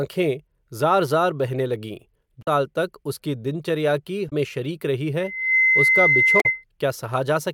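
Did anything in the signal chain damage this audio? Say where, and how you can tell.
Yes. Short glitches break into the speech at 2.39 to 2.47 s, 4.26 to 4.32 s and 6.37 to 6.46 s. This is damaged data in a compressed stream at the codec or storage stage. The decoder misreads corrupted frames, loses sync and jumps to the next frame header.

From 5.18 s a steady 2.1 kHz tone swells over roughly 0.4 s into a squeal, sitting a few dB above the speech until 6.64 s. This is loudspeaker feedback squeal in the acoustic path. The microphone picks up its own loudspeaker, and loop gain above one at 2.1 kHz lets that tone build.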